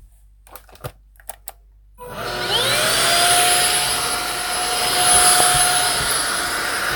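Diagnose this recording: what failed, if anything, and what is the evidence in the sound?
A single loud pop sits at 5.40 to 5.42 s. It lasts about 20 ms and peaks roughly 15 dB above the surrounding sound. The sound carries on underneath without a break, so nothing was lost or cut. A voltage step was added on top of the signal. The stage is likely the analogue wiring, from a plug, switch or static discharge. The circuits after it shaped that step into one sharp thump.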